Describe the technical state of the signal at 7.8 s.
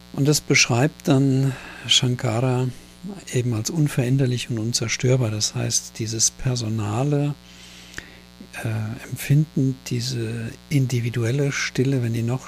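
Mains buzz sits under the audio at 7.8 s, as it does across the whole clip. Sharp switching spikes from the power supply, the sort a dimmer, rectifier or unshielded cable lets in, arrive twice per cycle of the 60 Hz mains, spreading harmonics of 60 Hz up into the kilohertz range. The result is a steady, raspy buzz rather than a smooth hum, lying roughly 25 dB below the signal.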